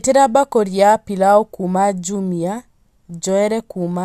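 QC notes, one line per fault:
No faults heard in playback.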